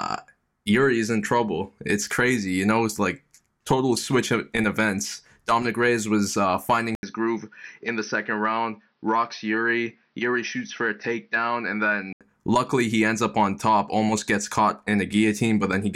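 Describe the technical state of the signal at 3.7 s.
At 3.7 s the speech signal is intact, with no audible fault at that moment.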